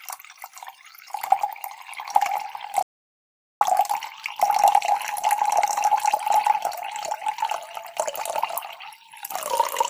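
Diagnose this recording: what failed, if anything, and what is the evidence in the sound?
An audio dropout to silence runs from 2.83 s to 3.61 s, removing about 0.78 s of sound. The audio stops abruptly and resumes just as abruptly, and the gap holds no room tone or noise floor at all. On a waveform it is a flat line; a spectrogram shows a sharp-edged black column across every frequency. The likely cause is input lost at the capture stage, such as a device or link dropping out, while the recorder kept writing silence.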